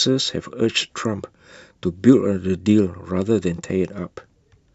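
No technical faults are audible.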